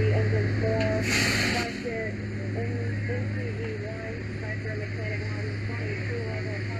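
Damaged data in a compressed stream at 1.21 to 1.27 s: corrupted frames make the decoder lose sync and hunt for the next header, giving a brief glitch. One channel drops out from 1.63 s to the end, with shared sound falling abruptly by about 6 dB, likely a lost stereo channel folded into the mono sum. The same corruption returns at 5.16 to 5.22 s as another short glitch.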